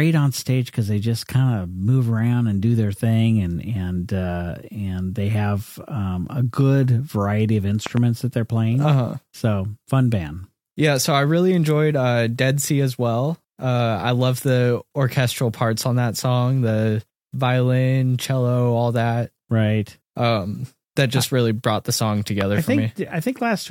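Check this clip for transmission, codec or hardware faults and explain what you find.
Two loud pops break into the speech. At 7.86 to 7.99 s, after "a good variety of", a double pop peaks well above the speech. A single pop at 22.41 to 22.43 s follows "really brought the song". Each is likely a voltage spike from a plug, switch or static. It sounds like a sharp thump over the continuing speech, and the waveform shows a tall, narrow spike. On a spectrogram it appears as a thin vertical stripe across all frequencies.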